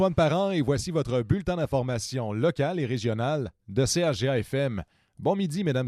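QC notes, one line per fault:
Nothing stood out on listening.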